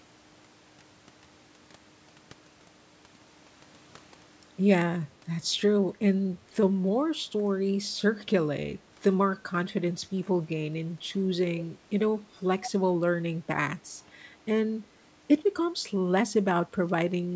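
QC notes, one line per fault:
12.62–12.70 s, echo leak: a brief delayed copy of the speech, 117 ms late and about 10 dB down, likely loudspeaker pickup the other side's echo canceller missed.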